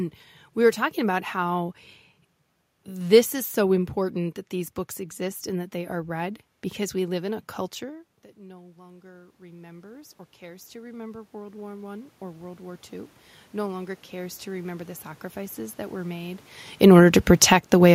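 Speech, and the level wanders because the automatic gain control keeps chasing the talker. Around 7.5 s the voice drops by about 22 dB as the talker moves away, and from 8.35 s to 17.9 s you get automatic gain rising, roughly 16 dB of slow boost that lifts the room noise right along with the voice. When the talker moves again near 16.5 s, the gain no longer suits the input, and automatic gain falling pulls things down by about 6 dB between 16.69 s and 17.69 s, so voice and background sink together.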